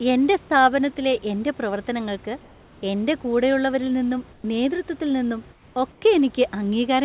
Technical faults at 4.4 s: comfort noise in place of the background

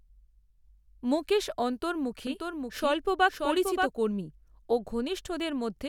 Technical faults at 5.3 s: none

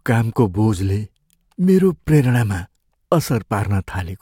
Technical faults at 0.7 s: none

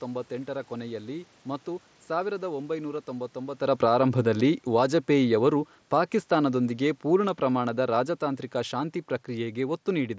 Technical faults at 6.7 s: automatic gain falling

